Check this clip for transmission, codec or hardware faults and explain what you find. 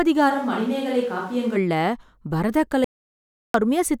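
Two faults can be heard in this speech clip: a stretch picked up by a distant microphone and a short dropout to silence.

Switch to a distant microphone, 0.31 to 1.55 s. The close microphone's feed likely failed or was left out here, so the recording falls back on a pickup further from the talker. The sound turns hollow and roomy at once, loses bass and drops by roughly 5 dB, while background noise rises to only about 25 dB below the speech. Both the change over and the return are abrupt.

Audio dropout to silence, 2.84 to 3.54 s. The input signal was likely lost for about 0.7 s, through a disconnected device, a failed link or an accidental mute, while the recorder kept writing silence. The speech cuts off mid-flow and the gap is silent with no room tone underneath. Whatever was said during that interval is missing, and the sound resumes just as suddenly.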